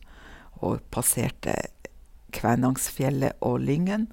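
No technical faults can be heard anywhere in the recording. The speech comes through steadily, with no dropouts, clicks or sudden changes in level.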